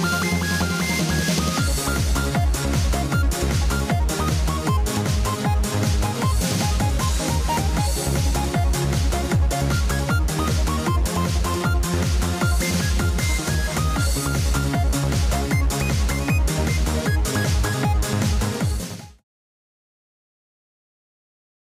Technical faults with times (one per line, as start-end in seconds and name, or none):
none